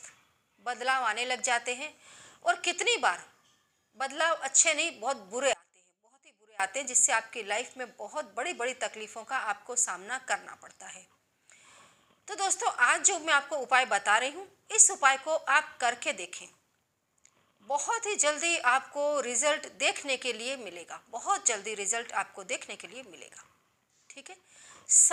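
An audio dropout to a faint residue runs from 5.53 to 6.60 s, about 1.06 s. The sound cuts out abruptly and leaves only a faint leak, roughly 25 dB below normal, before snapping back. Most likely the wanted signal was briefly lost while the path downstream stayed live.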